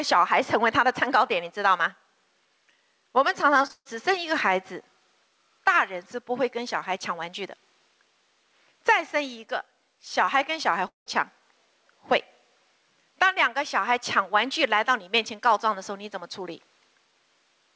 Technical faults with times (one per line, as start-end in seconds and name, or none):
0.00-17.75 gain pumping
3.62-3.71 short concealed packet loss
3.71-3.87 burst of packet loss
10.87-11.08 long network dropout